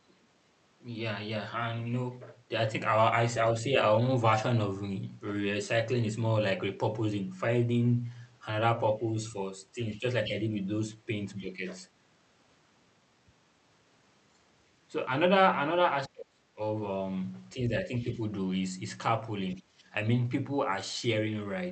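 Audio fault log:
9.0–11.43 s and 17.99–19.62 s, other side's voice leaking through: a second voice is heard under the talker, about 15 dB below it in the first stretch and much fainter, about 30 dB down, in the second. This is likely loudspeaker playback of the far end reaching the microphone and not fully removed by the echo canceller.
10.0–11.63 s and 16.08–19.81 s, speech suppressed in double talk: the talker's level dips in pieces while the far side plays on the loudspeaker. The first stretch loses around a third of a second in total, with drops of about 10 dB. The second loses about a second, with drops reaching about 30 dB. The likely cause is the echo canceller failing to separate near-end speech from echo during overlap and attenuating both. The Opus call path's 8 kHz band limit is audible underneath.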